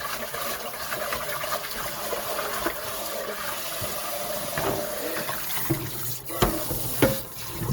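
Opus compression runs throughout this everyday sound recording, making tones grainy and noisy. This fits about 24 kbps, likely CELT mode filling starved bands with folded energy or noise.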